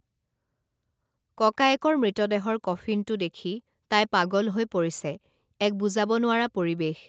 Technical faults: none

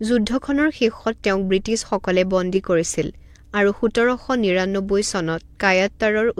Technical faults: none

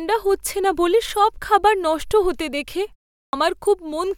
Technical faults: clipped start after a pause

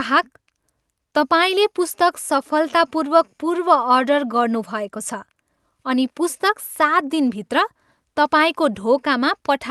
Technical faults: none

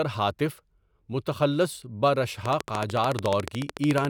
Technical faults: train of clicks

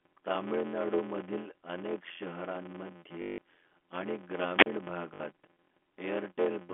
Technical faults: block size mismatch (padded); packet loss with last packet repeated; wireless microphone squelch dropout

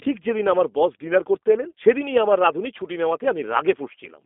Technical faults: G.729 codec

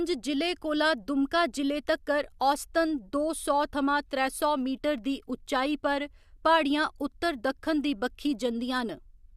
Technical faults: none

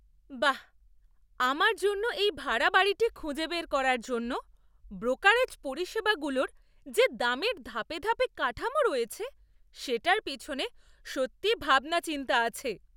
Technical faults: none

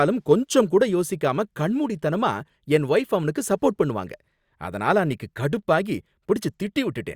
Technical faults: none

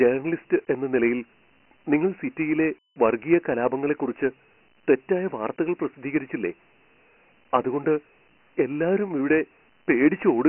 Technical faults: Dialogic VOX ADPCM

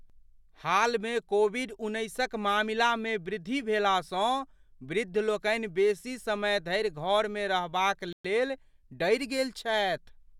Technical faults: Bluetooth stall

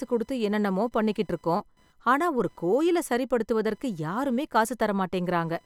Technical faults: computer activity noise

